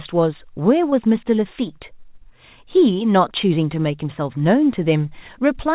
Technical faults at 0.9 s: short concealed packet loss

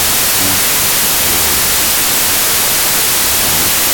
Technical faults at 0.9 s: wrong sample width

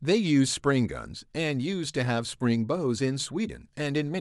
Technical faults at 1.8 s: none

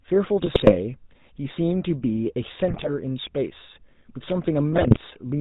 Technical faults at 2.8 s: GSM full-rate codec; GSM bit errors

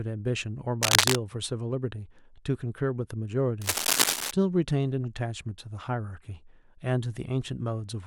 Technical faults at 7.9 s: none

